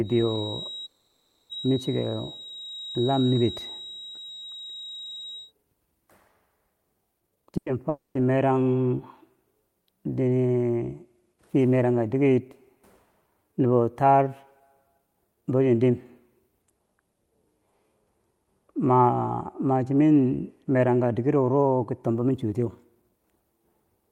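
The clip is speech, and it has several call-path faults. From 0.0 to 5.53 s a thin, steady tone sits at 3.8 kHz, roughly 15 dB below the speech. It swells and fades slowly in level but never grows. This is a feedback whistle. The likely cause is a loudspeaker-to-microphone loop running just short of full feedback. One frequency keeps ringing without building up. Inside that stretch, from 0.85 to 1.51 s, the audio stops moving forward. The last sound is drawn out as a fading buzz or hiss for about 640 ms. It never drops to silence. Speech then resumes exactly where it stopped, so nothing is lost. This is a call audio freeze. Delayed packets are the likely cause: the jitter buffer ran dry and the receiver filled the wait. The result is a 640 ms gap inserted into the flow. From 7.20 to 7.51 s the speech rushes at double speed, with pitch unchanged. Roughly 300 ms is squeezed out. This is a jitter buffer speed-up. 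The buffer held too much audio, so the receiver cut many short pitch-period pieces to reduce delay. The same thing happens twice more, more gently. From 14.98 to 15.91 s it runs at 114 percent, losing roughly 150 ms. From 20.61 to 23.31 s it runs at 111 percent, losing roughly 300 ms. Those passages sound hurried rather than chopped. Right after the first burst, from 7.57 to 7.72 s, one sound is held too long, with a slight buzz or dip. This is a short stall from a late packet. A packet missed its slot. The receiver stretched the last sound for 90 ms, then carried on from the same point. Nothing is missing, but the timing slips. From 7.89 to 8.17 s there is a long network dropout. The last sound fades out as a buzz or hiss, then about 150 ms of silence follows. The speech returns further along, and 260 ms of it is simply gone. The likely cause is a run of packets that never arrived. Unlike the freeze and the stall, this one loses content.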